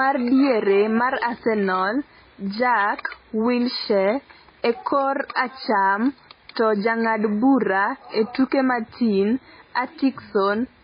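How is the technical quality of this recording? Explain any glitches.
Quality is poor, with heavy codec damage throughout the speech. The likely cause is MP3 compression: treble stops sharply at 5 kHz, and weak frequency components flicker in and out between frames, giving a watery, swirly texture and smeared consonant attacks, consistent with a very low bitrate around 16 kbps.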